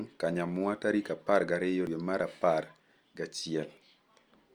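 At 1.87 s and again at 3.77 s the speech jumps forward, with about a tenth of a second simply gone and the two sides butted together with no gap. That's audio missing between chunks, likely the recorder handing over from one 2-second block to the next and dropping a slice each time. The two skips land about 2 seconds apart.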